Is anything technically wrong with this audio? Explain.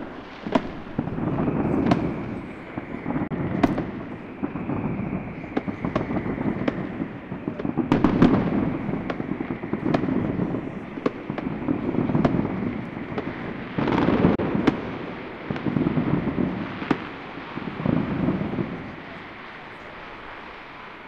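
Yes. There are two short holes, from 3.27 to 3.31 s and from 14.35 to 14.39 s. The sound cuts to silence, and when it returns about 29 ms of it is simply gone. This is likely a Bluetooth dropout: a couple of packets missed their deadline and were discarded.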